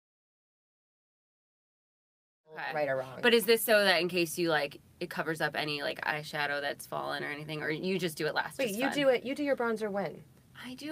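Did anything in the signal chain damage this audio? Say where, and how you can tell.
No; just a smooth fade-in, full by 2.95 s.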